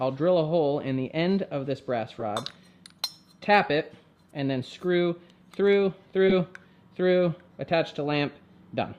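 Corrupt frame decoded at 2.19 to 2.24 s and 6.28 to 6.33 s: damaged bits across a couple of compressed frames misplace energy, giving brief noisy blips, the second louder at about -10 dBFS.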